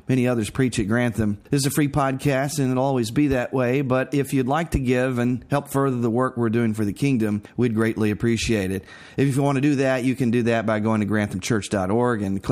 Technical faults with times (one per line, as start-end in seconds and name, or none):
none